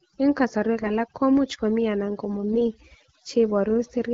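Speech clip. Overdone noise removal runs throughout: a suppressor set too strong cuts frequency bands near its noise estimate, leaving near-silent gaps with twinkling specks. AMR bit errors strike at 0.80 to 0.91 s and 2.52 to 2.62 s: a few percent of the weakly protected bits flip, which fits about five damaged 20 ms frames each time, so the voice turns briefly hoarse and gargly while keeping its rough pitch and level. Underneath, the AMR wideband (HD Voice) codec adds only light coding damage, which fits a 12.65 kbit/s rate.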